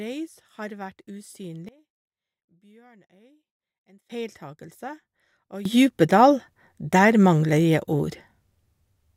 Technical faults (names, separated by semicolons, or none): sudden gain jump